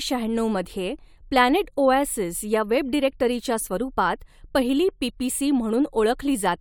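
No technical faults can be heard anywhere in the recording.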